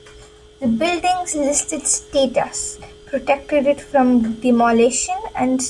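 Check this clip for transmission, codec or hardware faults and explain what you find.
No transmission, codec or hardware fault can be heard anywhere in this speech recording. There is nothing here that needs explaining.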